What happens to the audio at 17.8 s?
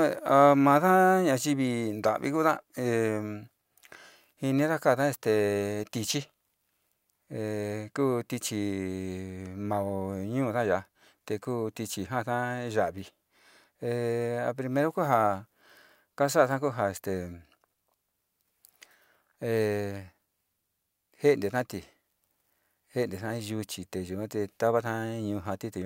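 Nothing goes wrong at 17.8 s: the speech continues intact there, with no dropout, click, distortion or other fault at that moment.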